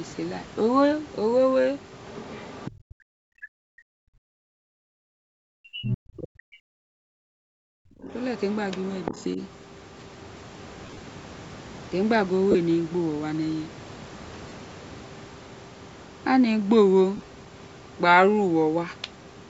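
A speech recording with several call-path faults. From 2.07 to 2.71 s and again from 8.09 to 9.24 s, the other side's voice leaks through, likely from incomplete echo cancellation, sitting roughly 20 to 25 dB under the talker as a faint second formant pattern on the spectrogram. Speech is suppressed in double talk from 2.89 to 4.24 s and 5.34 to 6.85 s, with drops of around 40 dB, and briefly and more mildly at 8.02 to 8.09 s and 9.11 to 9.38 s, likely because the canceller turned the talker down along with the echo; the waveform shows chopped, sunken stretches. The background is gated by the echo canceller at 4.52 to 5.06 s and 7.13 to 7.74 s, the room noise falling about 40 dB to near-blank patches on the spectrogram before returning. Lost LE Audio frames appear at 10.86 to 11.00 s (105 ms of losses scattered over 135 ms, longest run about 40 ms), 12.51 s and 14.49 s (30 ms each), and 17.17 to 17.27 s (75 ms over 105 ms). 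In each case the decoder's refilled spectrum smears harmonics into noisy vertical bands.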